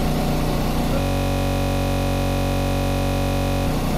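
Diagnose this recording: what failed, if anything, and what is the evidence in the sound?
A system hang loop at the driver or buffer stage. From 1.00 s to 3.67 s, one 21.33 ms slice repeats 125 times, a rapid 46.9 Hz cycle. That fits a 1024-sample ring buffer replayed while the system froze. Essentially no audio seems lost.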